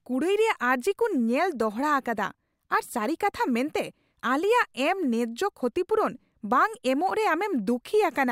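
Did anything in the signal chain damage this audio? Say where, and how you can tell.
No, nothing in the signal chain audibly damaged this speech recording. No stage between capture and playback leaves any trace that can be heard anywhere in the clip.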